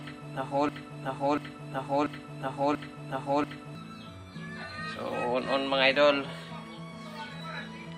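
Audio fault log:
0.00–3.75 s: broken-record loop. The clip opens already caught in it. A 0.69 s fragment repeats exactly, back to back, four times. The stream likely stalled and kept resending its last held piece. Whatever audio belonged in that span is lost.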